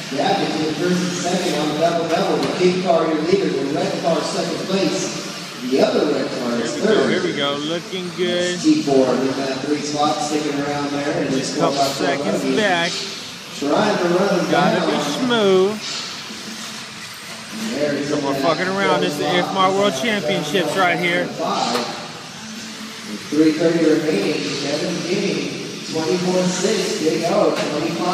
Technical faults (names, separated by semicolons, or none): none